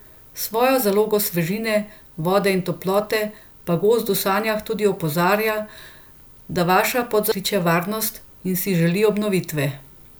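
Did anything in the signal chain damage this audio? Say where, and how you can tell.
Yes, there is damaged data in a compressed stream at the codec stage, heard at 7.32 s in this speech, between "da vaša" and "kliče varnost". A brief glitch interrupts the sound. Corrupt bytes made the decoder misread the affected frame, lose sync and hunt for the next valid header. The waveform shows an abrupt discontinuity instead of a smooth join.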